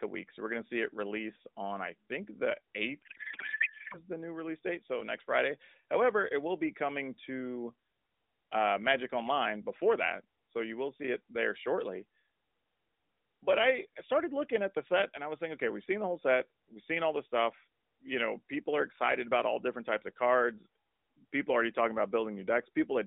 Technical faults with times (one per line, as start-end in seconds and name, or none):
3.02-3.99 codec payload misread